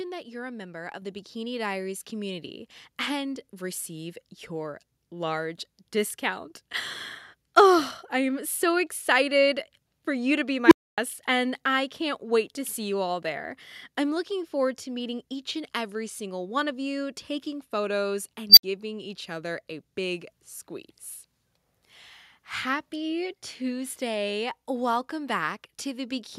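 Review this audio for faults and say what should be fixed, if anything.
At 1.02 s the microphone volume is stepped up: the speech and the background noise both jump by about 4 dB at the same instant. The call software judged the input too quiet and raised the device gain in a single step. Unlike a talker moving closer, the noise floor rises together with the speech, and it happens abruptly rather than over a word or two. Automatic gain adjustment should be ramped smoothly or disabled in favour of a fixed input level.

Two unstable filter events occur, one at 10.66 s and one at 18.50 s. A recursive filter received bad coefficients, so its output grew without bound. At 10.66 s a tone of around 300 Hz swells over about 54 ms, clips, and then cuts to about 267 ms of silence until the filter resets. At 18.50 s a tone of around 5 kHz builds over about 72 ms and is followed by about 64 ms of silence. 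Acoustic feedback howl also grows, but it builds more slowly and has no sudden dead gap afterwards. Filter coefficients should be validated for stability, and the state should be reset when overflow is detected, before any sound is output.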